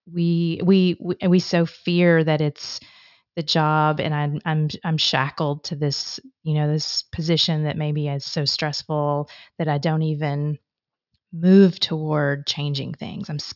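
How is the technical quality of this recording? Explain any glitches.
No technical faults can be heard.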